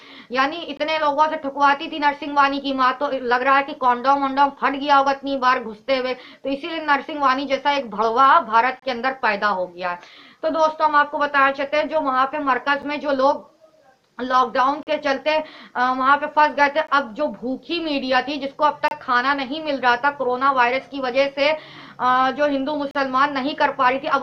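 Gaps between stream segments punch short, hard-edged silences into the sound at 0.77, 8.8, 12.82, 14.83, 16.87, 18.88 and 22.91 s, lasting 7 to 39 ms. They land on 2-second segment boundaries, where mismatched timestamps leave holes the player fills with silence. No audio is lost.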